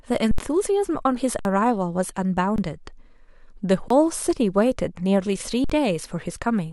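The output buffer ran empty five times in this speech clip, an underrun with held sample: the converter froze on its last value at 0.31, 1.39, 2.56, 3.88 and 5.64 s, for 72, 59, 21, 21 and 54 ms. The sound flatlines, then resumes with the audio in between lost.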